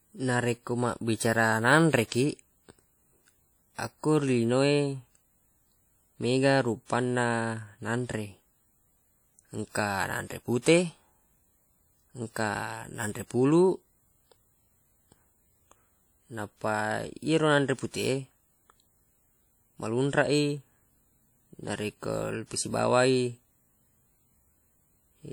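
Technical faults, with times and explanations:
Throughout, WMA compression: a transform codec, likely Windows Media Audio at a bitrate that fits roughly 48 kbps, is coding long blocks and spreading quantisation noise across tens of milliseconds around each sound in the speech. Weak spectral lines are dropped even though content still reaches about 20.1 kHz. The damage is plainly audible: the speech rings and sounds washy, with a hiss that swells and fades with the signal.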